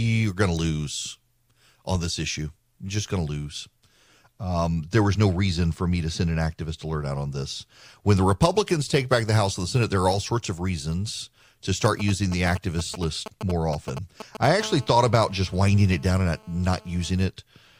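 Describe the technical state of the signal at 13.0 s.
GSM signalling bursts, 11.85 to 14.46 s: a nearby 2G phone's radio bursts, rectified by the audio circuit, gallop as dit-dit-dit 217 Hz buzzes roughly 10 dB under the speech.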